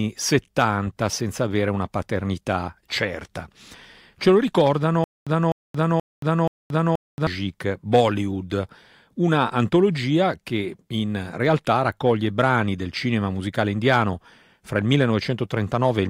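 A playback stall, likely a stream or player retrying, causes stutter with silent gaps from 5.04 to 7.27 s. A 252 ms fragment of speech repeats four times, each followed by 227 ms of dead silence, and the intervening audio is lost.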